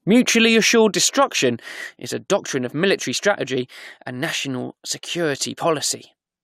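A speech clip with one fault: damaged data in the compressed stream at 3.17 s. Corrupted bytes there make the decoder misread a frame and lose sync until it finds the next frame header, giving a brief chirp or blip in the audio.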